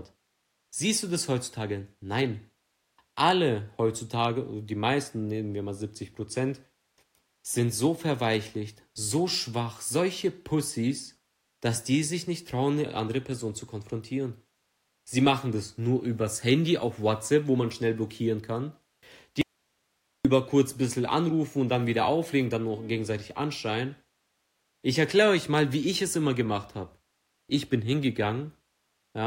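From 19.41 to 20.25 s the speech drops out for about 0.83 s, leaving only hiss roughly 50 dB down, likely an audio dropout to a faint residue.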